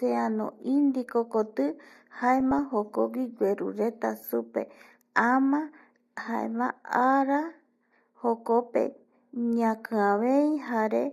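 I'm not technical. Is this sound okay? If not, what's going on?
No. Two short bursts of DAB burbling, at 2.40 to 2.59 s and 9.60 to 9.70 s: weak digital radio reception corrupted the audio data, so parts of the speech get short blips of noise.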